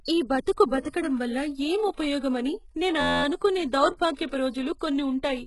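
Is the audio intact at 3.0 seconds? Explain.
No. From 3.01 to 3.24 s a system hang loop occurs: the driver stalled while the hardware kept replaying one 11.61 ms block, which fits a 512-sample buffer. It repeats 20 times, producing a steady buzz at about 86.1 Hz.

Across that moment the speech also shows heavy codec damage, likely from HE-AAC compression at a low bitrate. Nothing is present above 11.5 kHz, and the treble is rebuilt from copied lower bands, so sibilants sound gritty or metallic rather than natural.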